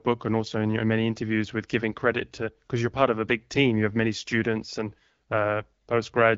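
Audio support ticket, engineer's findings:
No faults found; speech is carried over the AMR wideband (HD Voice) codec, with light coding texture that fits the 12.65 kbit/s mode and nothing above 7.5 kHz, as expected for that path.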